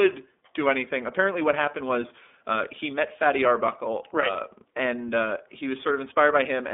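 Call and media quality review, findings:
iLBC codec, throughout the clip. Band-limited speech: no content above 3.8 kHz, line band roughly 250 Hz to 3.6 kHz. Plainly audible rough, synthetic texture from each frame's excitation being coded independently, consistent with the 30 ms, 13.33 kbps mode.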